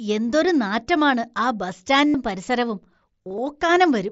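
Concealed Bluetooth headset packet loss: headset packets dropped at 2.08–2.14 s, after "എന്തൊരു നാറ്റമാണ് ആ ബസ്", and the receiver looped recent waveform, giving a brief buzzy hold. At 3.24–3.38 s, scattered shorter losses cause small warbles.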